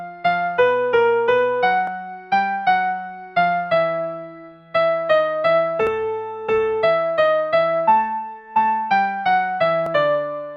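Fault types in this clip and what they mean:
Overlap between stream segments: the player trimmed 10 to 16 ms of sound where 4-second segments met with overlapping timestamps, so the waveform jumps in a tiny skip at 1.87, 5.87 and 9.86 s. Unlike a dropout, nothing falls silent, and the four-second spacing marks segment boundaries.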